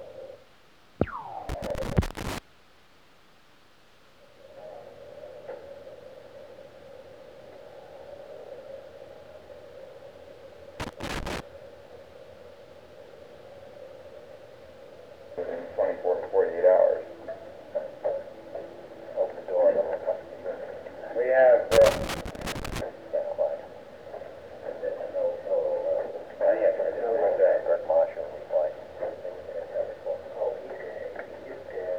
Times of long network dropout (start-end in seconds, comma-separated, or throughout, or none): none